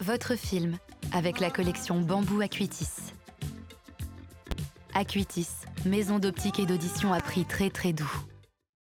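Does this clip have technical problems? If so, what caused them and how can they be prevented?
Yes, two loud pops at 4.51–4.54 s and 7.20–7.22 s jump roughly 15 dB above the sound, likely voltage spikes from static or switching. Use grounded, secured cables and avoid switching gear mid-take.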